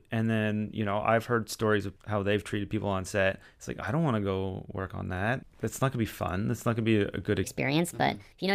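From 7.44 s to the end of the clip at 8.54 s, the speech jumps into a section at the wrong speed, running about 1.36 times too fast and roughly five semitones higher. This is likely playback against a mismatched clock, leaving that closing stretch hurried and chipmunk-like.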